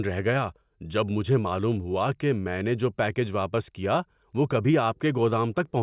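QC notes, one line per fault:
No fault is heard anywhere in the speech. There is nothing here that needs a timed entry.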